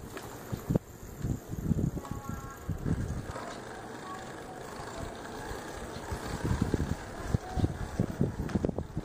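Nothing technically wrong turns up anywhere in this audio; no faults to report.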